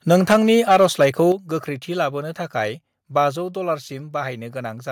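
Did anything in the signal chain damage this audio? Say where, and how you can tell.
Yes. From 0.1 to 1.06 s the loudest speech peaks are flattened and carry a harsh, crackling edge. On the waveform those peaks show squared-off tops, with a few percent of samples clipped. The spectrogram shows broadband vertical smears at each clipped peak. The likely cause is microphone overload at the converter stage: input gain was set so high that the signal tried to exceed full scale by about 8 dB and the converter simply chopped the tops off.

The level also drops abruptly three times, at 0.33 s by about 2 dB, at 1.32 s by about 6 dB, and at 3.36 s by about 3 dB, with speech and background falling together. On the waveform each looks like a sudden step in the envelope. On the spectrogram the whole frequency range dims at once. This points to call processing, likely microphone volume stepped down by software reacting to the overload, cutting the device's input gain in single steps.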